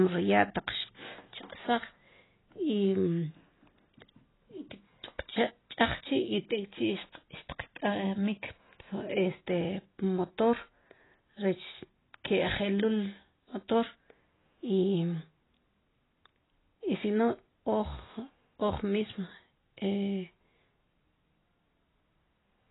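From start to finish the speech has nothing above about 3.9 kHz and carries heavy coding damage, with a dull, smeared quality. The likely cause is AAC compression: an AAC-LC encoder starved of bits drops its cut-off low and spends its limited budget coarsely quantising the remaining frequency lines, discarding what its hearing model rates least audible. The 3.9 kHz ceiling and the depth of the damage point to a very low bitrate, around 16 kbps.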